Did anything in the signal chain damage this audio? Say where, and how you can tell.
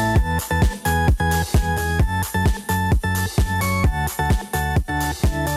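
Yes, digital radio blending to analogue at the receiver: from 1.71 to 4.96 s the sound cross-fades over about 188 ms to the FM broadcast, dropping about 1 dB with hiss roughly 40 dB down, then blends back. A smooth fade rather than a click or gap separates it from a codec dropout.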